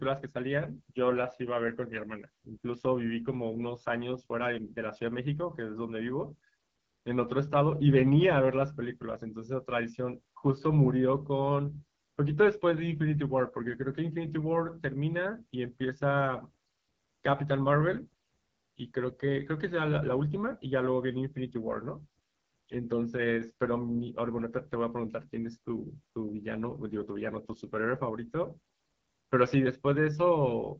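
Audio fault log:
throughout: AMR wideband (HD Voice) codec. The speech has plainly audible coding damage, with a rough, raspy edge. Nothing is heard above 7.6 kHz. The codec rebuilds speech up to 6.4 kHz from a pulse-driven vocal tract model. It fills the band just above with shaped noise. The rasp points to one of the lowest AMR-WB rates, which fits an 8.85 kbit/s mode. So few pulses leave the sound coarse.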